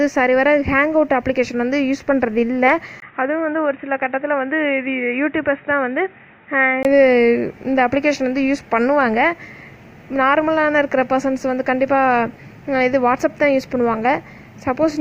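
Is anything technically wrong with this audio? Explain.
Yes. From 3.0 to 6.85 s the sound turns dull and boxy, with nothing above 3.8 kHz, a brief gap at 3.0 s, a level about 5 dB lower and fresh faint background noise, likely from the input switching to a poorer device.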